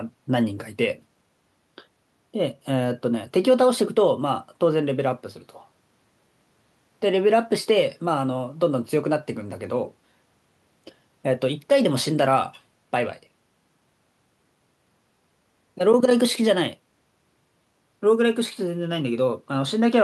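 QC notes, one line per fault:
Nothing to flag here: the speech sounds like what you'd expect from an ordinary Opus call at 64 kbps, with the high end rolling off around 12 kHz.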